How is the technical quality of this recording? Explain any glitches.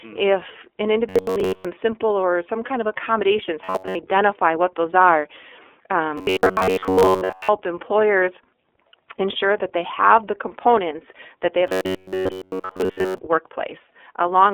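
Technical quality is poor. The whole recording is narrowband speech with plainly audible coding damage, and four stretches turn robotic.

Throughout, the iLBC codec codes each 30 ms frame independently inside a 300 Hz to 3.4 kHz band, leaving speech rough and synthetic. A spectrogram shows nothing above 3.4 kHz.

At 1.09–1.65 s, 3.64–3.97 s, 6.18–7.49 s and 11.67–13.18 s, the sound becomes robotic, with a rigid metallic buzz at 93.8 Hz. This is likely from repeated short buffers of about 10.7 ms replacing most of the real audio. A spectrogram shows evenly spaced harmonics at 93.8 Hz, and the waveform shows identical repeating cycles.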